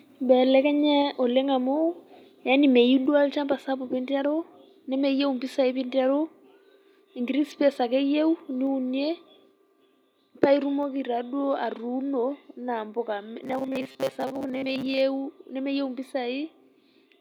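From 13.43 to 15.01 s the speech goes robotic, a stiff metallic buzz pinned at 134 Hz. That's robotic sound from repeated short buffers, likely caused by audio arriving late, so a roughly 7.5 ms chunk keeps looping and about half the real signal gets skipped.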